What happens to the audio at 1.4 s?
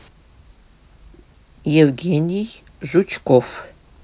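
Nothing goes wrong at 1.4 s: the speech carries on cleanly through that point, with no dropout, click or other audible fault.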